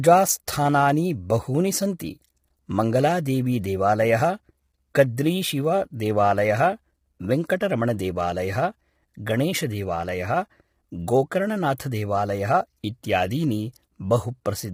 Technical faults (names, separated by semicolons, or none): low-delay AAC compression